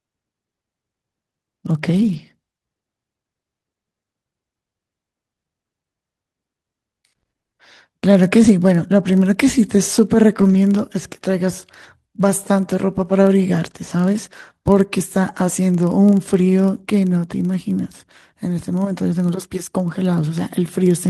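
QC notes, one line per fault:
1.93–2.19 s, lost packet rebuilt from error correction: a rough, noisier patch where the decoder played the low-bitrate backup copies, about 140 ms' worth, which fits a run of seven packets.
9.03 s, lost packet rebuilt from error correction: a brief grainy blip, about 20 ms, where one lost packet was filled in from the next packet's coarse copy, so there's no gap.
10.41–10.55 s, lost packet rebuilt from error correction: about 80 ms sounds rougher and hissier, which points to four packets replaced by their low-bitrate backups.
14.25–14.27 s and 17.83–17.85 s, lost packet rebuilt from error correction: two short, gritty moments, about 20 ms each, where a single packet was rebuilt from the next packet's copy.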